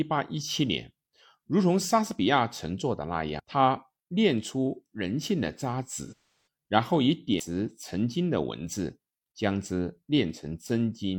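At 3.39 s and again at 7.40 s there is a CD skip: a knock or disc flaw throws the laser onto another turn of the spiral, so a tick and a near-instant mute of a few milliseconds lead into a hard jump in the speech. Unlike codec dropouts, nothing is smeared; the sound simply resumes from elsewhere. Between 6.07 and 6.44 s comes AAC frame loss with concealment, about 341 ms of missing data spread over 427 ms, which fits roughly eight lost frames. The decoder rebuilds them from the last good spectrum, producing a noisy, phasey smear that, over the longest run of nearly a third of a second, sinks toward silence before fading back, rather than cutting cleanly.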